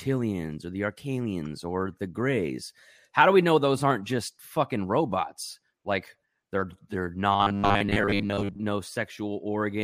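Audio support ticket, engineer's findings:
Audio delivery likely starving the playback buffer; ~10 ms chunk looped to fill gaps. Robotic sound from repeated short buffers, 7.33–8.60 s, right after "they're they're". Rigid metallic buzz at 100 Hz; most of the real audio skipped, words only loosely followed.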